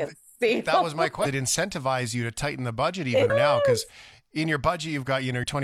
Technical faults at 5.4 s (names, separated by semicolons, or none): damaged data in a compressed stream